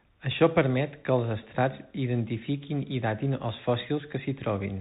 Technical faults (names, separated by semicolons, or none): Bluetooth CVSD headset codec